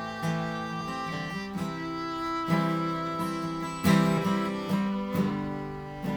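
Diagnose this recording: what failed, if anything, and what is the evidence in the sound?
The codec stage failed: compressed frames skipped. At 0.80 s and again at 5.29 s the decoder dropped roughly one frame, either missing from the file or rejected as corrupt, so playback jumps ahead by about 30 ms each time. The frame length of about 26.1 ms fits a 1152-sample MP3-style frame at 44.1 kHz.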